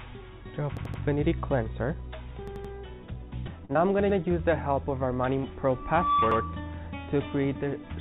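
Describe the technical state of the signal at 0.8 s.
At 0.8 s the signal is inside a repeated buffer fault running from 0.77 to 1.02 s. Fresh audio failed to reach the device in time, so it replayed its last block, about 85 ms long (which fits a 4096-sample buffer), three extra times. The result is a rhythmic stutter with a hard join at each repeat, and essentially no audio goes missing. Unlike a dropout, there is no silent gap. The same fragment recurs identically.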